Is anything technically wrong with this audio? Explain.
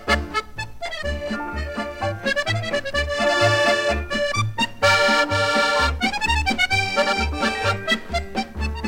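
No, nothing technically wrong can be heard here.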